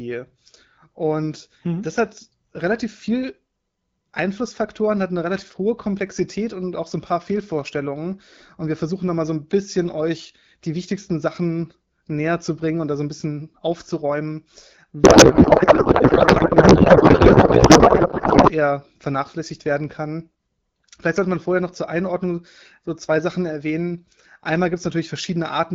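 From 15.03 to 18.52 s, just before "vernachlässigt werden kann", the speech gives way to garbled noise and warble that barely tracks it. This is a codec payload misread: AMR frames packed in octet-aligned mode are being parsed as bandwidth-efficient, so every field is shifted and the decoder builds output from misplaced bits. Outside that span the audio carries the light coding texture of AMR wideband, consistent with a 12.65 kbit/s stream.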